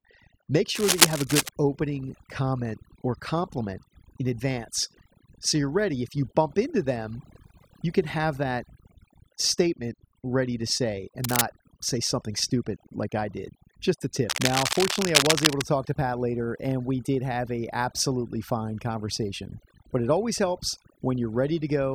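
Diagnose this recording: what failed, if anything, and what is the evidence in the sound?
Overdone noise removal runs through the whole speech recording. This points to the processing stage after capture. The background drops, with small twinkling specks where noise used to be. The suppressor was set too aggressively. It pushes individual frequency bands down whenever they sit close to its noise estimate. The quieter parts of the voice fall under that threshold and are removed along with the noise.

Cable scratch noise appears in three places, from 0.75 to 1.49 s, from 11.24 to 11.41 s, and from 14.30 to 15.62 s. The bursts are dense and uneven, like scratching or rustling over the speech. The first is a little louder than the voice. The other two are roughly as loud as it. The stage is the analogue wiring. The likely cause is a worn cable, connector or control being moved, so its contact resistance changes rapidly.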